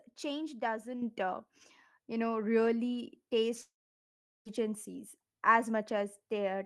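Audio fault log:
1.02 s, microphone volume stepped up: speech and background noise jump together by about 7 dB in one instant step, unlike a talker simply speaking louder.
3.61 to 4.47 s, long network dropout: the sound smears into a short fading buzz, then about 0.73 s of silence; speech resumes abruptly, likely missing roughly 0.84 s lost in transit.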